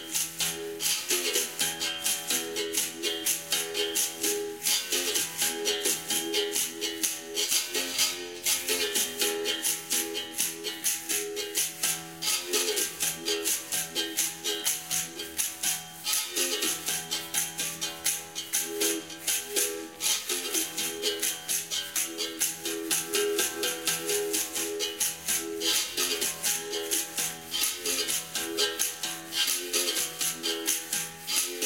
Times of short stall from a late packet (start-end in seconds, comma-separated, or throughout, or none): none